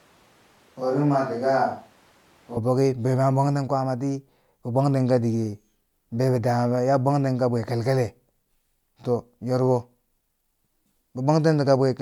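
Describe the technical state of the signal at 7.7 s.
At 7.7 s the speech signal is intact, with no technical fault present at that moment.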